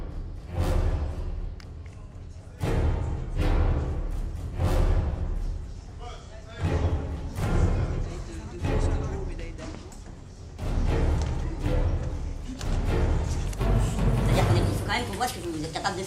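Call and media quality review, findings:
Section at the wrong speed, 13.46 s to 16.06 s, running to the end. Sound abruptly turns high and hurried. Playback runs 1.33 times fast, pitch up roughly five semitones. Likely a clock mismatch in the player or edit path, resampling at the wrong rate.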